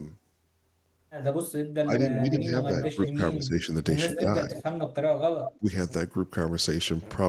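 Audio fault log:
1.8–3.61 s, 4.18–4.59 s, 5.58–5.69 s, speech suppressed in double talk: the speech dips by about 15, 10 and 20 dB, likely an echo canceller ducking the near talker along with the echo; the waveform envelope sags.
1.98–2.32 s, 3.02–3.44 s, 4.11–4.2 s, 4.53–4.93 s, 5.41–5.58 s, echo leak: a copy trails 145 ms behind, about 5–10 dB down, likely residual loudspeaker echo; the spectrogram shows time-shifted duplicate harmonics.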